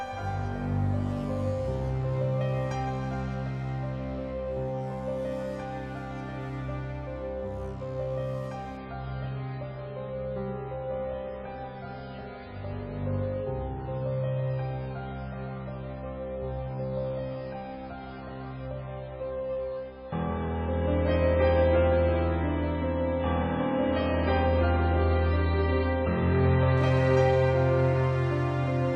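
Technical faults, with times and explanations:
8.77–26.77 s, adaptive stream at a lower bitrate: a network slowdown forced a cheaper stream, so treble abruptly stops at 5.2 kHz and artefacts thicken, with no gap. This fits a switch from 128 to 16 kbit/s MP3.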